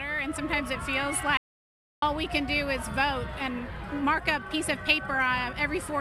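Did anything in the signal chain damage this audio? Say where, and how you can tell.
Yes. From 1.37 to 2.02 s the signal drops to silence for about 650 ms: an audio dropout to silence, likely a lost input link or device upstream of the recorder. The waveform goes flat, and the spectrogram shows a blank vertical band with no room-tone floor.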